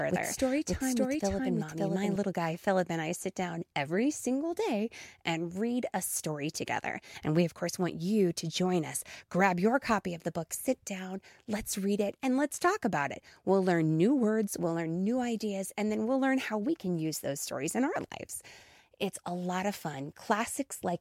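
From the very start until 2.16 s, a doubled audio track plays: an equally loud copy of the speech trails about half a second behind, likely from a second, slower capture path. On a spectrogram, every band pattern repeats at that offset, then the duplicate cuts off abruptly.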